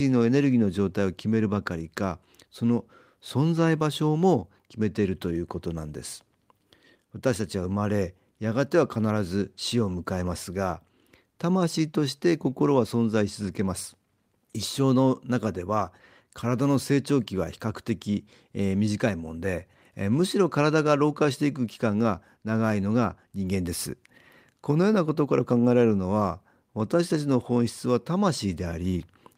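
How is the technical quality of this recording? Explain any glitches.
Nothing in the recording stood out as a technical problem on listening, so there are no glitches to explain.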